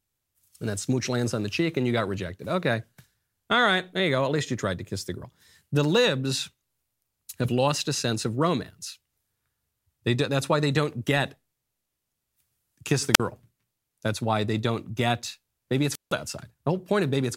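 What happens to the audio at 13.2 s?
Right after "kiss the", from 13.14 to 13.20 s, the speech suffers a wireless microphone squelch dropout. The analogue FM radio link weakens enough that the receiver's squelch shuts the output, leaving a hole of near silence about 46 ms long. What separates it from a digital packet dropout or a plain edit gap is the brief swell of hiss or static as the signal fades, just before the mute takes hold.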